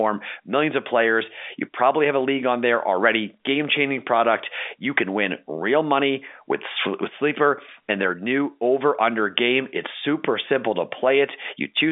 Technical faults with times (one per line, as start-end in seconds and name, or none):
none